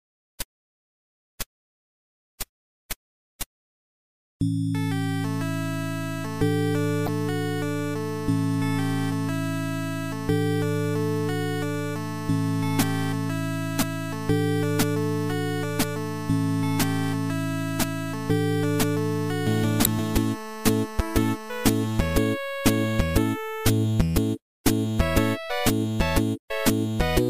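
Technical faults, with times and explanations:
7.04 to 7.09 s and 19.84 to 19.87 s, damaged data in a compressed stream: two short blips, about 45 ms and 25 ms long. The stored frames there are corrupt, so the decoder misreads or drops them and loses sync until it finds a valid frame header, briefly putting out wrong sound or a gap instead of the real sound. On a spectrogram each appears as a narrow vertical disturbance. The waveform shows an abrupt discontinuity at each edge.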